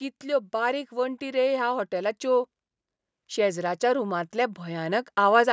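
From 0.21 to 2.53 s, and again from 3.34 to 5.48 s, the speech and its background swell together by about 5 dB. This is automatic gain rising: the automatic gain control judged the input too quiet and gradually raised its gain on this call microphone path.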